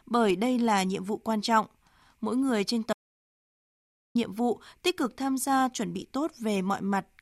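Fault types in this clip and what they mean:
Audio dropout to silence: the input signal was likely lost, through a disconnected device or failed link, while the recorder kept writing silence. The speech cuts off abruptly at 2.93 s and resumes at 4.15 s, leaving 1.22 s of dead silence with no room tone.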